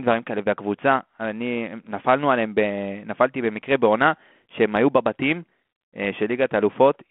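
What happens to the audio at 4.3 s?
Nothing goes wrong at 4.3 s; the speech carries on intact there, heard through the narrow telephone band of a 32 kbit/s G.726 ADPCM link, with no break, click or added distortion at that moment.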